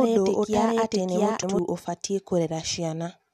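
A short speech recording carries a doubled audio track from the very start until 1.59 s. A second full-band copy of the speech runs roughly 0.7 s behind the first at about the same level, with no decay or room colouring, and it stops abruptly at 1.59 s. It is likely caused by the signal being captured twice through a slower second path. On a spectrogram, every syllable's harmonic stack appears twice, the repeat shifted by a fixed gap. The waveform shows overlapping envelopes that collapse to a single envelope at the cut-off. At 1.42 s, compressed frames are skipped. Around 0.4 s of audio is missing, and the jump points to roughly fifteen frames of about 23 ms each. A spectrogram shows a discontinuity in the speech harmonics there. The waveform jumps ahead to later speech.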